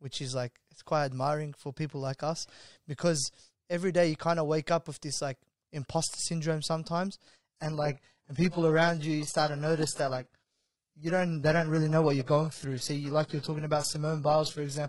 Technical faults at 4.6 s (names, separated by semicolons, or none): none